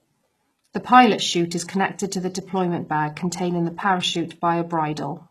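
From start to finish, the speech carries plainly audible coding damage. Nothing sounds above about 12.3 kHz. The treble still reaches fairly high, but it is not the real top end. The s sounds come out gritty and lispy, with a metallic edge. The likely cause is HE-AAC compression at a very low bitrate, around 16 kbps. That codec keeps only the lower spectrum and rebuilds the highs by copying lower bands upward. The copied harmonics fail to line up with the real ones.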